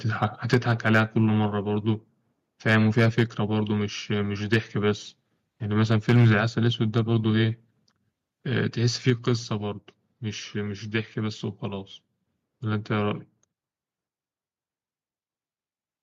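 Harsh, crackling edges land on the loudest syllables at 0.22–0.24 s, 0.53–1.0 s, 2.68–3.23 s, 4.53–4.56 s, 5.92–6.3 s, 6.97–6.99 s and 9.08–9.1 s. Peaks push about 2 to 5 dB past the ceiling and their tops are flattened. This is microphone overload, likely from input gain set too high. The distortion rides only the peaks and leaves the overall level unchanged.

At 0.54 s, in the middle of a clipped burst, and again at 9.1 s, right after one, voice and background fall together by about 4 dB and stay lower. This is the microphone volume stepped down, likely the call software cutting the input gain in one step. Unlike the overload crackle, it is a clean, lasting drop in level across speech and room sound alike.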